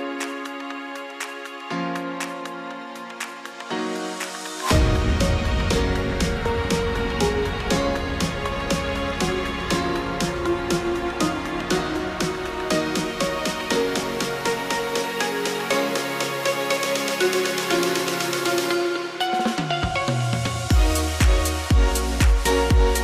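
Listening closely, nothing in the audio stood out as a technical problem.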